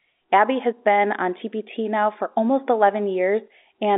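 No technical faults are audible.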